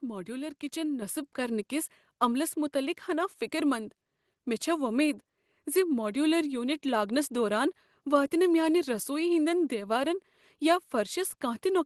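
Speech passed through an Opus call path whose top end stops near 12 kHz, with a microphone volume stepped up at about 1.02 s, just after "ماڈیولر کچن". Voice and background jump together by about 6 dB in one instant, not a gradual ramp or a talker getting louder, which points to the software raising the input level.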